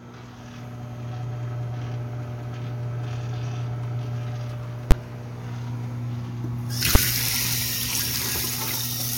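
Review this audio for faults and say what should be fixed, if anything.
Two bangs, at 4.91 s and 6.95 s, are invalid numbers at full scale: a calculation produced infinite or invalid values, which were pinned to the largest positive or negative value for a whole processing block. The first lasts about 11.6 ms, which fits a 512-sample block; the second about 5.8 ms, which fits a 256-sample block. Both are too short to separate into two edges, so each is heard as a single loud bang replacing the sound. To prevent it, check each block's output for infinite or invalid values and replace them with zero before conversion.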